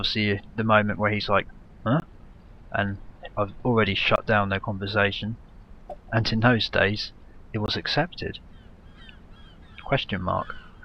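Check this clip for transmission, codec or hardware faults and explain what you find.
Three dropouts are present, each a block of digital silence lasting 20 ms, at 2.00–2.02 s, 4.16–4.18 s and 7.66–7.68 s. The signal is replaced by zeros with no fade in or out, which points to the output buffer not being filled in time. The sound cuts out and back abruptly, so each dropout is heard as a short hole in the sound.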